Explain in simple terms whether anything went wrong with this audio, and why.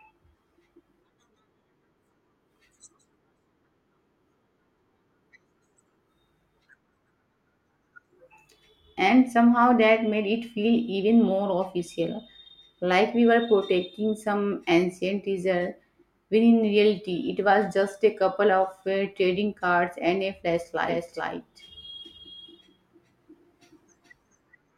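Something does go wrong near the end. At 20.86 s the speech suddenly gets a doubled audio track: a second copy of the same sound kicks in about 0.4 s behind the first, a bit quieter, and runs all the way to the end. It's a clean, abrupt copy with no fade or room sound to it. It most likely comes from the audio being captured twice through a slower second path, or from an edit leaving two copies out of step.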